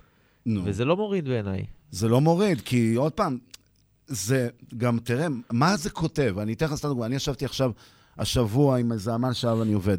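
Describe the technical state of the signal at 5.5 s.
The speech signal is intact at 5.5 s, with no dropout, clipping, distortion or other fault at that moment.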